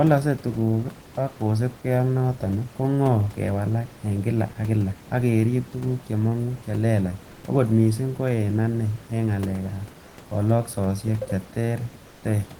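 From 12.07 to 12.19 s, the sender likely stopped transmitting during a pause in the speech, as discontinuous transmission does, and the receiver generated its own filler. The result is comfort noise in place of the background for about 120 ms. The room noise, which sits about 24 dB below the loudest speech, gives way to a flat, featureless hiss about 5 dB quieter, so the ambience briefly thins and loses its texture.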